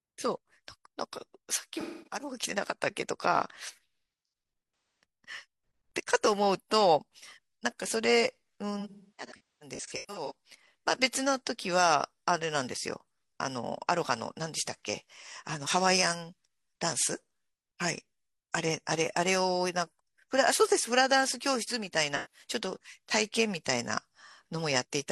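Speech clip with AAC frame loss and concealment: smeared, phasey patches at 1.80–2.21 s, 5.03 s and 22.16–22.45 s, plus a scattered run from 8.80–10.34 s where the decoder keeps guessing from old spectrum.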